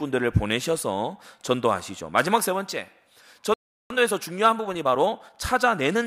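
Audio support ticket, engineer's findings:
Playback stall, 3.54 to 3.90 s: speech drops to silence for about 0.36 s mid-flow, likely a player buffer underrun or blocked output thread.

Time-compressed catch-up, 3.90 to 5.96 s: speech hurried to 1.15x at unchanged pitch, as the player splices and cross-fades small pieces to drain its backlog. Pitch is unchanged, so this is not a sample-rate mismatch.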